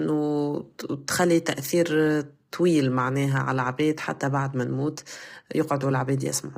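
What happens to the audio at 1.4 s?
At 1.4 s the speech is rough and grainy, likely from low-delay AAC compression. This persists throughout. Short frames blur harmonics, leaving noise between them and nothing above 15.6 kHz.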